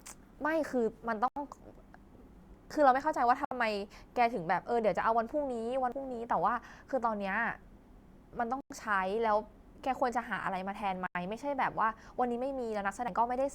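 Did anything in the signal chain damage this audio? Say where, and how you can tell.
Yes. At 1.28, 3.45, 8.61 and 11.06 s the speech cuts to silence for 83, 66, 100 and 86 ms, then resumes. This points to the wireless playback link, likely a Bluetooth stall: delayed packets let the headphone buffer run empty until resent data arrived.

At 5.92 and 13.08 s there is an abrupt jump in the speech and no gap. This is likely a dropped buffer (overrun) at the driver stage: samples were overwritten before being read, so about 70 ms vanished and the edges were joined.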